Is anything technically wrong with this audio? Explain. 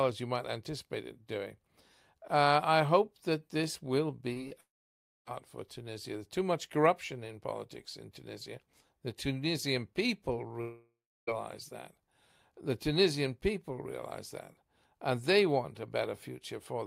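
Yes. The speech has two kinds of network fault.

Just after "hope that this will", there are two short concealed packet losses, at 4.33 to 4.38 s and again at 4.48 to 4.53 s. In each, about 20 ms of audio failed to arrive, and the receiver filled a slightly longer span by extending the preceding sound before crossfading back. Each is heard as a quick smear or wobble. On a spectrogram it shows as a thin vertical band of repeated or smoothed harmonics, and on the waveform as a brief repeating pattern.

Two longer gaps follow, at 4.61 to 5.33 s and 10.61 to 11.29 s. Each is heard as the last sound stretching into a fading buzz or hiss before going quiet, after which the speech picks up again with roughly two-thirds of a second missing. The likely cause is a long network dropout. The first gap leaves about 0.6 s of near silence, and the second about 0.32 s. A spectrogram shows decaying smeared harmonics ending in an empty block, and the waveform tapers to a flat line before resuming.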